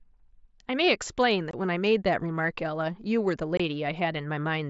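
At 1.51 to 1.54 s and again at 3.57 to 3.60 s, the speech drops out for about 22 ms. This is unconcealed Bluetooth headset packet loss: each gap fits three consecutive voice packets from the mSBC wideband link failing to arrive, with silence or an idle pattern put in their place. Unlike a concealed loss, which would be smeared over with repeated or faded sound, these holes are empty and start and stop abruptly.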